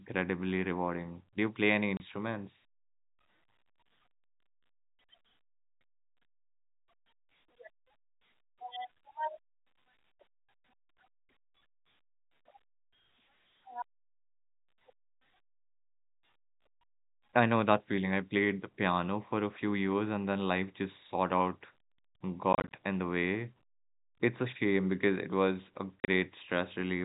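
Packet loss filled with silence occurs three times in this speech. At 1.97 s there is a single 30 ms gap. From 22.53 to 22.73 s, 110 ms drops out in short holes no longer than 30 ms. From 26.0 to 26.08 s, 70 ms is lost, including one 40 ms hole. The receiver played silence for each missing packet. The hole lengths fit 10 ms packets, and every dropout has hard edges against the narrowband G.711 telephone audio.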